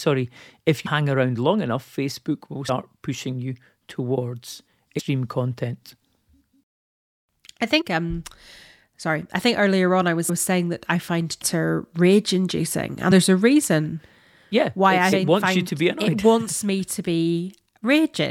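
Whole compressed frames of roughly 26 ms each are dropped, either missing from the file or rejected by the decoder as damaged, so the speech skips forward by several frames at a time. These compressed frames skipped cause jumps of around a twentieth to a fifth of a second at 0.85, 2.68, 4.98, 7.80–7.82, 10.28, 11.41, 13.10 and 15.11 s.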